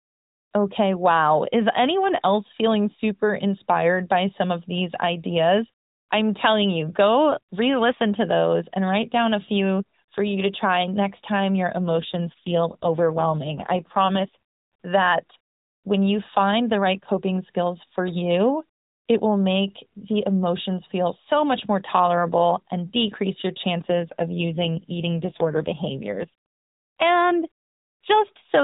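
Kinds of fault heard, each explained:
AMR rate drop: from 11.76 to 14.36 s and again from 23.86 to 26.29 s, the speech turns rougher, buzzier and more synthetic, then recovers. The network has pushed the AMR-NB encoder into a lower mode, spending bits on error protection instead of on the vocal-tract model, and the coarser texture fits a step from 12.2 down to 5.9 kbps. The narrow band stays the same and nothing drops out, so only the texture changes.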